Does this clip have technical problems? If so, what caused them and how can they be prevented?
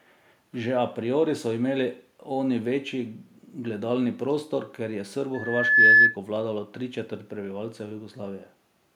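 Yes. From 5.34 to 6.16 s, loudspeaker feedback squeal occurs: the microphone picked up its own loudspeaker, and loop gain exceeded one at 1.7 kHz. A pure tone swells over about half a second to roughly 15 dB above the speech. Reducing gain, separating microphone and loudspeaker, or notching 1.7 kHz prevents it.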